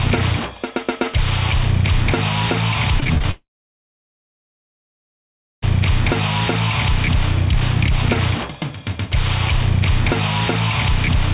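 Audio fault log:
3.00–3.25 s, repeated packet loss (robotic sound): packets failed to arrive five times in a quarter of a second, with the longest gap about 24 ms. The receiver patched each hole by stretching the last received sound, so roughly a third of this stretch is synthetic fill. The fast chain of patches gives a choppy, robotic texture with small pieces missing, heard through a band that stops at 4 kHz, in line with a narrowband telephone codec.
3.31–5.64 s, long network dropout: the likely cause is a network outage that stopped audio from reaching the receiver for about 2.3 s. The receiver first extends the last sound briefly as a fading buzz or hiss, then goes silent for about 2.2 s. The sound picks up again at 5.64 s, but the part lost in between never plays.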